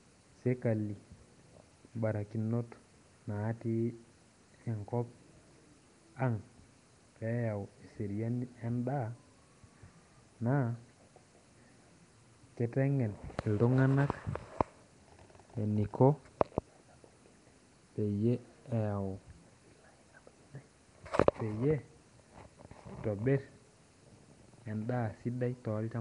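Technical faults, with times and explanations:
Throughout, Nellymoser compression: rough, hissy, smeared underwater speech with nothing above 10.6 kHz, likely from Nellymoser Asao giving weak bands no bits and filling them with noise.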